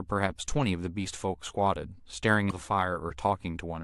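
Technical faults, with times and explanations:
2.47–2.52 s, damaged data in a compressed stream: a short burst of corrupted bytes in the speech makes the decoder misread those frames and lose sync until it finds the next valid frame header, leaving a brief glitch of about 50 ms.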